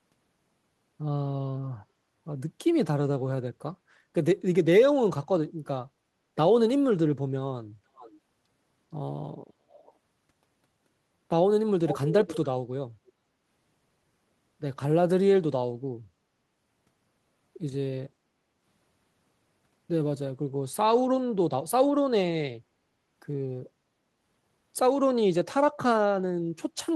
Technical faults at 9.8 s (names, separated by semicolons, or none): echo leak